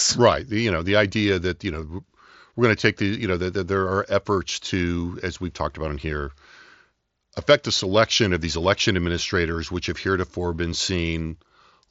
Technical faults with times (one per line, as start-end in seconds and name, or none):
1.82 concealed Bluetooth headset packet loss